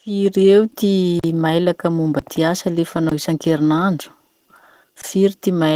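Opus voice compression runs throughout at 16 kbps. Its hybrid mode codes the excitation coarsely, so the speech sounds muffled, hoarse and slightly robotic.

Blocks of digital silence interrupt it four times. The first falls at 1.20 to 1.24 s, after "eo ty", a 43 ms hole that fits a 2048-sample buffer missed. Others follow at 2.19 to 2.22 s before "ty asa", 3.09 to 3.12 s after "mailaky momba ty asa", and 5.01 to 5.04 s. Each cuts out abruptly, leaving a short gap.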